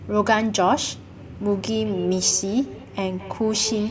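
From 1.84 s to the end of the speech, each word returns roughly a fifth of a second later as a thinner, more ringing copy, peaking at about 14 dB below the speech. This is feedback echo between two devices: two devices in the same room share the call, one plays out what the other's microphone sent, and that microphone picks it up again. Each device's echo canceller removes only its own playback, so the returning sound survives.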